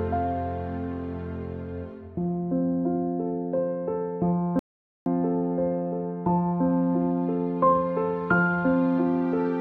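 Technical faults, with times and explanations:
4.59 to 5.06 s, audio dropout to silence: the sound stops abruptly and leaves about 470 ms of silence, with no room tone, before resuming mid-flow. The input was likely lost briefly while recording continued writing zeros, so that stretch is gone.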